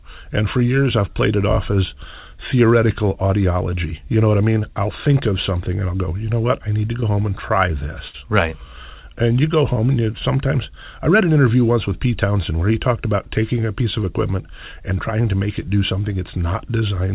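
At 7.00 to 7.04 s, between "what I need to" and "home and try", a short concealed packet loss replaces about 20 ms with extrapolated sound. It is heard as a brief smear, and shows as a thin blurred stripe in the spectrogram. From 8.08 to 8.16 s, just after "home and try", a burst of packet loss drops about 60 ms. The concealment holds the last sound and fades it, so the waveform envelope decays before the speech resumes further on. At 9.74 to 9.78 s, between "you go" and "and you sometimes I", another short concealed loss of about 20 ms produces a tiny wobble, visible as a small smudge under the 4 kHz ceiling left by the G.711 A-law call path.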